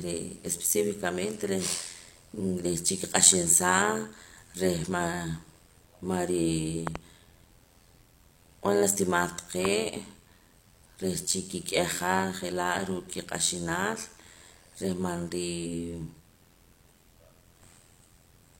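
From the start to the end, the speech carries an overlap-add ripple. The audio was split into short windowed frames and rebuilt with an overlap that does not sum to a steady gain. So the level swings by about 11 dB once per frame, at a rate around 100 Hz. A swing that fast is not heard as tremolo. It becomes a metallic buzz laid over the speech.

From 6.87 to 6.98 s there is a loud pop, heard as two sharp hits in quick succession. Another single pop follows at 9.65 to 9.67 s. Each peaks roughly 20 dB above the speech, which carries on underneath. The likely cause is a sudden voltage step or pulse from a plug, a switch, static or a driver glitch. The circuits after it shape that pulse into a crisp pop or thump.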